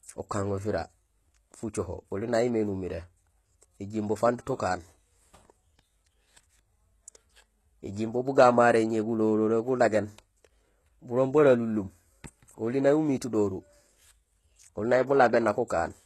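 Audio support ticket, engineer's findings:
HE-AAC compression, whole clip. Speech treble sounds synthetic: s sounds gritty and a bit lispy, upper band metallic rather than real. Nothing above 12.3 kHz. Likely a low-bitrate HE-AAC encode, something around 16 kbps going by the damage. Only the low band is properly coded; the top is rebuilt by band replication, so its harmonics don't line up with the real ones. Damage is plainly audible.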